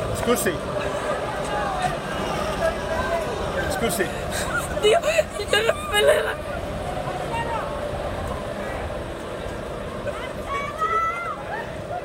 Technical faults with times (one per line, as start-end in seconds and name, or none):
8.37 dropped buffer (overrun)